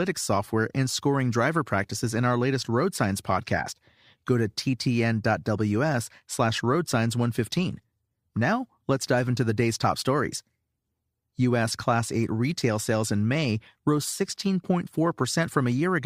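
Speech, and nothing is technically wrong with it.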